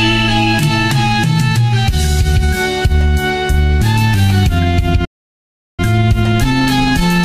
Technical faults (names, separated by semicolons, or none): playback stall; time-compressed catch-up